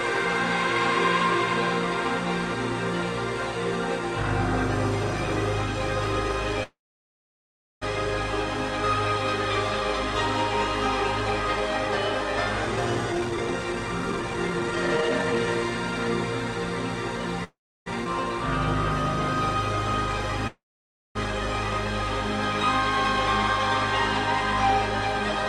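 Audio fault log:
6.63 to 7.83 s, call audio freeze: the sound stalls and is continued briefly as a fading buzz, then about 1.07 s of silence, before resuming exactly where it stopped. It likely comes from delayed packets emptying the jitter buffer. Unlike a skip, nothing is lost; the 1.18 s gap simply adds delay.
12.67 to 15.39 s, jitter buffer speed-up: the audio runs at about 138% speed while its pitch stays unchanged, so it sounds hurried rather than chipmunk-like. Short pitch-period pieces are cut repeatedly to shed the built-up delay, removing about a second in total, unlike a single clean jump.
17.44 to 17.88 s, call audio freeze: a shorter stall, with a fading buzzy tail and then about 0.31 s of silence, likely from packets arriving late. Playback picks up from the same point with nothing missing, adding 0.42 s of delay instead of losing content.
18.04 to 18.07 s, skip ahead: playback jumps forward with almost no gap, only a 13 ms join, and roughly 0.4 s of audio is gone. 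Unlike the freezes, there is no stall or fading tail. The two sides are stitched almost directly, which cuts the delay built up just before.
20.47 to 21.17 s, call audio freeze: the sound hangs as a decaying buzz, then falls silent for about 0.55 s, likely caused by held-up packets starving the jitter buffer. It resumes from where it stopped, so the 0.68 s is an inserted pause rather than missing audio.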